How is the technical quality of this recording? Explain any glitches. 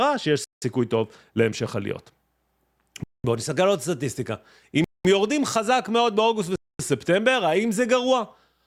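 The speech is broken by four brief dropouts to silence. They sound like a Bluetooth stall. They fall at 0.44 to 0.62 s, 3.04 to 3.24 s, 4.84 to 5.05 s and 6.56 to 6.79 s. Each gap lasts about 0.18 to 0.24 s. The sound stops dead, then resumes. The likely cause is radio interference delaying packets, so the receiver's buffer emptied and playback paused until retransmitted data arrived.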